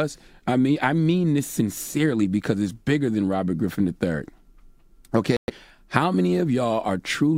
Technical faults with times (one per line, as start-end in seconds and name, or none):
5.37-5.50 Bluetooth stall